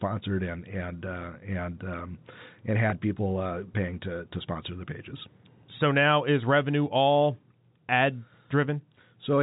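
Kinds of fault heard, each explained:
Packet loss with pitch repetition: Around 2.90 to 2.92 s, a gap of about 20 ms, which fits a single lost packet, is filled by repeating the last pitch period of the speech. It sounds like a brief, slightly held buzzy tone rather than silence. That sets it apart from a plain dropout, which leaves a hole or click. The narrowband telephone sound of the G.711 coding continues through the repair.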